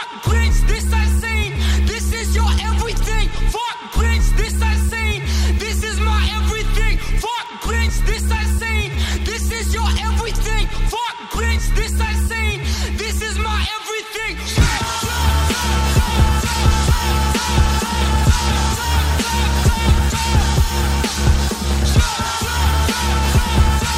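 At 7.46 s a bit error spike occurs: a single bit flipped somewhere in memory or on a digital link, so the stored sample value leapt by a power of two and then snapped straight back. The event is so brief that it fits corruption of only two consecutive samples. It produces one sharp, isolated tick spread across the whole spectrum, with no connection to the surrounding audio.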